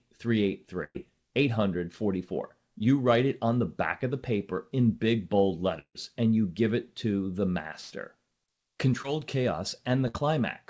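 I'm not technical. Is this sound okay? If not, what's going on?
No. The audio has three kinds of break.

The first is a burst of packet loss. It happens at 0.84 to 1.11 s, 7.81 to 7.92 s and 10.08 to 10.16 s. Some pieces of the call arrived too late or never came. Each time, the phone stretched out the last bit of sound for about 60 to 110 ms, letting it fade. Then the audio jumps ahead. About 100 ms is missing in the first two breaks and about 60 ms in the last. The first one also goes quiet briefly.

The second is a longer gap from 5.79 to 5.97 s. The last sound is held for about 150 ms as a fading buzz or hiss. Then comes a short silence before the audio returns. About 160 ms never gets played. The likely cause is a long network dropout, where nothing arrived for a moment.

The third is a short concealed packet loss at 9.02 to 9.06 s. A tiny piece, about 20 ms, went missing. The phone patched it by carrying the sound on briefly. 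So you may hear only a quick smear or wobble.

All of this came through a call connection that keeps nothing above 8 kHz, so the sound is a little dull.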